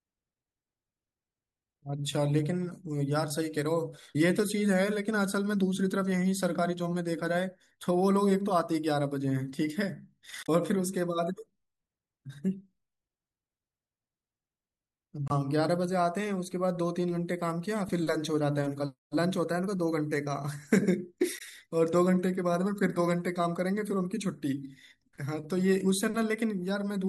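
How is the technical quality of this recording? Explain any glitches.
The speech has four short glitches from damaged data in a compressed stream, at 4.12–4.16 s, 10.43–10.49 s, 15.28–15.32 s and 21.35–21.41 s, each lasting roughly 40 to 65 ms. At these points corrupted bytes reach the decoder, which misreads the affected frames, loses synchronisation and scans ahead for the next valid frame header. Each event is heard as a brief chirp, squawk, click or short hole cutting across the speech.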